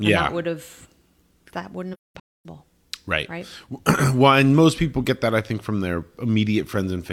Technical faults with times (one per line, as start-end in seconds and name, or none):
1.93-2.46 AAC frame loss with muting